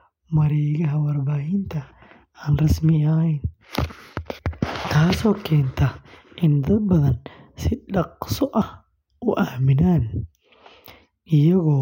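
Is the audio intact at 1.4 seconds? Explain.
Yes, the speech at 1.4 seconds plays through intact, with no audible dropout, glitch or distortion at that moment.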